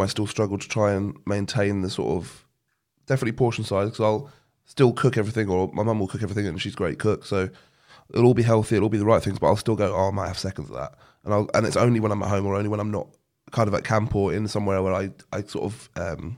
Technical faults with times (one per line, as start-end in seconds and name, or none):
none